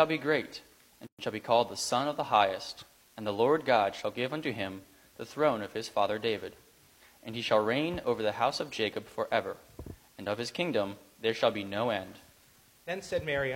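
A constant, even hiss runs under the whole clip, sitting roughly 30 dB below the signal, with no grit or harmonic distortion riding on the sound itself. This is low bit depth with dither: the level of the hiss fits roughly 9-bit quantisation, and because random dither was added before each sample was rounded, the rounding error has been turned into steady, signal-independent white noise rather than the crunchy distortion that plain truncation would leave.

At 1.07 s the sound drops abruptly into silence and resumes at 1.19 s, picking up exactly where it left off after a hole of about 118 ms. The codec smears the edges, so the truly silent stretch is a little shorter than the full gap. This is a gap at a join of encoded pieces: the audio was encoded in separate chunks and spliced without trimming, so one chunk's padded final frame and the next chunk's encoder start-up delay both survive as dead air in the middle of continuous sound.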